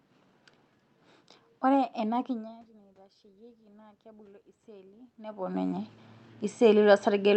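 A speech clip carried over an Opus call path: from 2.28 to 5.97 s, after the input level drops by about 22 dB, automatic gain rising lifts everything by about 8 dB. Voice and room noise swell together, unlike a talker moving closer.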